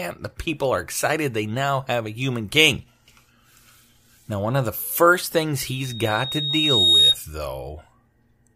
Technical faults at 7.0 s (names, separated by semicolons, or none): loudspeaker feedback squeal